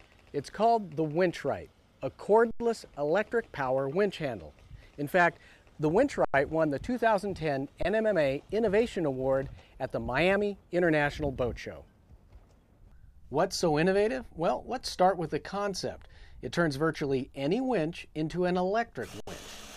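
Underrun with held sample at 2.51, 6.25, 7.83 and 19.20 s: the output buffer ran dry, so the converter held its last value. The sound freezes flat for about 93, 93, 23 and 70 ms, fitting 4096- and 1024-sample buffers, then resumes where it stopped with only a soft edge.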